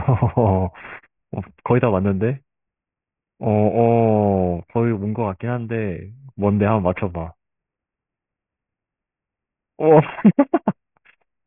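From start to finish the speech carries aliasing. The audio was resampled down without an anti-alias filter, which fits a new rate of around 6 kHz, so energy above 3 kHz folds back below that edge at unrelated frequencies, roughly 25 dB under the speech. Sibilants turn gritty and metallic, and the spectrum runs hard up to 3 kHz. A clean low-pass would only dull the top end, but here false, inharmonic tones are added.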